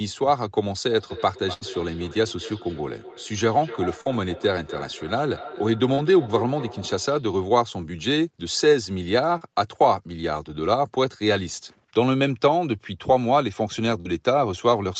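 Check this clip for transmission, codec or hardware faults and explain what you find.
There are three kinds of transmission fault here, all typical of a call.

Feedback echo between two devices, 0.89 to 7.33 s: a second nearby device replays this audio into the microphone, so each sound returns roughly every third of a second, peaking at about 15 dB below the speech.

Burst of packet loss, 1.53 to 1.63 s: around 80 ms never arrived, and the receiver stretched and faded the last sound into a brief held buzz or fading hiss before jumping ahead.

Short concealed packet loss at 4.01, 5.95, 9.37 and 14.01 s: gaps of 20 to 40 ms were patched by extending the preceding sound, leaving quick smears or wobbles.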